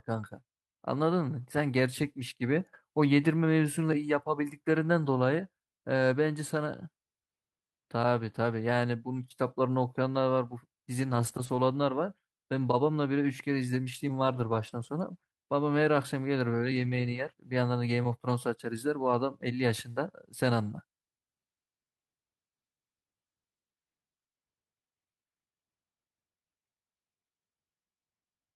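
Brief rough, noisy stretches with no gaps at 11.03–11.57 s, 14.27–14.89 s and 16.75–17.33 s: lost packets rebuilt from error correction, with low-bitrate copies standing in for roughly 300 ms each.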